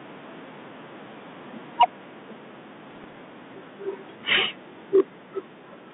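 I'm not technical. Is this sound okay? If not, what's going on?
No. There are three problems.

Microphone overload: at 1.8 to 1.85 s, 4.29 to 4.44 s and 4.95 to 5.01 s the loudest moments turn harsh and crackly. The input volume was likely set too high, so the tops of those peaks were cut off.

Microphone volume stepped down: during the first and last of those crackles, at 1.82 s and 4.96 s, the sound suddenly gets a little quieter. The calling software likely noticed the overload and turned the microphone down in one quick step.

Bit errors on an ADPCM link: from 2.88 to 3.21 s there are pops and short rough bursts, with the loudness briefly wobbling. Some of the digital data was damaged on the way, and each damaged piece confuses the decoder for a moment, so the roughness lingers.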